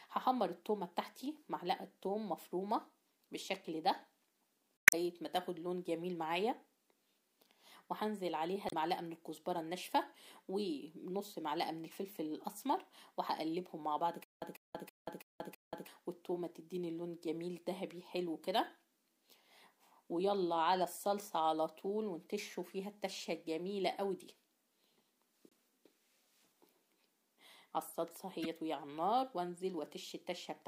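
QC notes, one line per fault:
4.77–4.94 s, 8.66–8.74 s, 25.49–25.53 s and 28.42–28.46 s: damaged data in a compressed stream. Each is a brief chirp or blip. Corrupted bytes make the decoder misread frames and lose sync, so it resyncs at the next frame header.
14.24–15.88 s: stutter with silent gaps. A 147 ms fragment plays five times, each followed by about 180 ms of digital silence, for a steady 327 ms cycle. The likely cause is a stalled player or stream replaying its last buffer on each retry and then running empty, so the audio meant for that stretch is lost.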